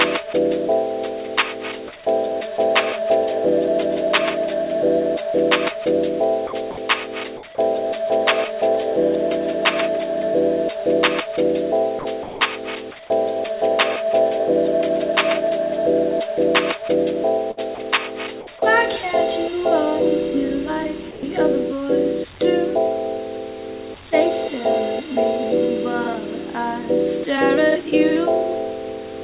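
Several short stretches of the audio give way to a flat wash of comfort noise and then snap back: 6.47–6.53 s, 6.71–6.77 s, 11.99–12.05 s, 12.23–12.41 s, 17.75–17.78 s and 21.11–21.23 s. Three last 60 ms, the shortest 30 ms, the longest 180 ms. That's likely sound dropped by the voice detector. The sender decided the quieter bits were background, stopped transmitting, and the receiver filled in with steady noise until the detector kicked back in. There's also a burst of packet loss at 17.51–17.60 s. About 60 ms of audio is simply missing, and the receiver stretches the last bit of sound across the gap, fading it as it goes, so you hear a brief held smear before the audio jumps ahead. The whole thing has the muffled top end of a narrowband call path, with nothing above 4 kHz, which fits G.711 A-law at 64 kbps.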